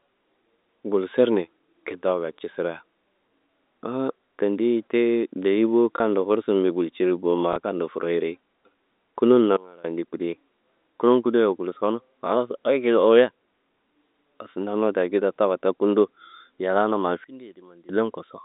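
At 5.97 and 7.53 s there's packet loss with the last packet repeated: a 30 ms gap, which points to a single lost 30 ms packet, gets filled by replaying the previous chunk. The repeat seldom lines up with the pitch, so you get a small blip each time.

Then at 9.57 to 9.85 s and again at 17.24 to 17.89 s, there's a sudden gain jump. The level, background noise included, drops by about 24 dB in one step, with no fade, then snaps back. That's likely a digital gain setting being applied without a ramp, so the edges can click. All of this rides on a narrow telephone band, 250 Hz to 3.7 kHz, consistent with G.711 telephone coding.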